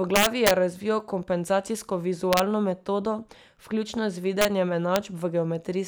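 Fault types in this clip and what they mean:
Integer overflow: loud peaks in this speech wrap to the opposite sign instead of limiting, giving harsh cracks, worst around 0.16 to 0.51 s before "razvijal kompenzacijsko".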